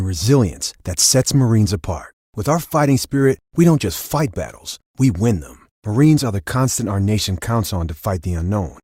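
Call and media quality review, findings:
Nothing to flag here; I listened through the speech and didn't hear any faults worth a ticket.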